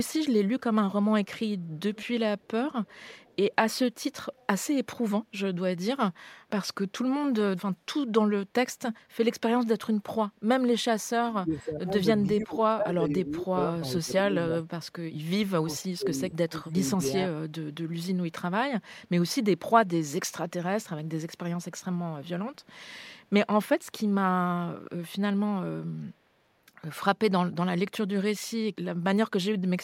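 Echo leak appears early in this speech recording, at 1.77–2.07, 2.38–2.48, 2.84–3.36 and 4.37–4.46 s: faint delayed copies trailing the talker by about 481 ms, roughly 20 to 40 dB below the direct speech. The likely cause is a far-end echo canceller letting its loudspeaker pickup slip back into the call. Speech suppressed in double talk follows at 10.99–14.53 and 15.63–17.33 s, where the talker's level dips in pieces by up to about 25 dB, for around two seconds and one second in total. That is likely an echo canceller mistaking overlapping talk for echo and turning the near speech down.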